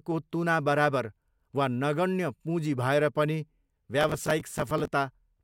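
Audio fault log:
4.01–4.88 s: processor overload crackle, a gritty tearing over the speech as roughly thirty buffers of about 5 ms miss their deadlines, each repeating old audio with hard edges.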